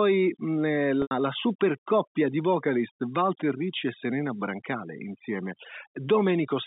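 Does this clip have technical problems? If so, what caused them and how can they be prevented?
Yes. Two faults can be heard in this speech clip.

Overdone noise removal affects the whole clip. The noise reducer was set too strong. It pushes individual frequency bands far down whenever they sit close to its noise estimate. Quiet parts of the speech get removed along with the noise. The pauses drop to near silence with faint twinkling specks. The voice is already squeezed into the telephone band of roughly 150 Hz to 3.7 kHz. To prevent this, use a gentler reduction setting, or clean the noise at the source.

Packet loss with pitch repetition occurs from 1.02 to 1.11 s. About 90 ms of audio is missing, which fits three lost packets. The receiver covered the gap by repeating the last pitch period and fading it out. That produces a short, held, buzzy tone. The speech then returns through a brief cross-fade. 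To prevent this, use a steadier network path, a larger jitter buffer, or forward error correction.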